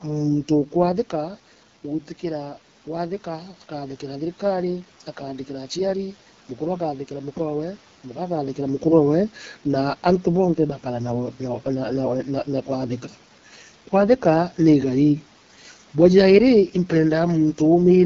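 Throughout, AMR wideband (HD Voice) codec damage is plainly audible: speech sounds rough and raspy, consistent with one of its lowest rates, around 8.85 kbit/s, with room noise audible beneath it.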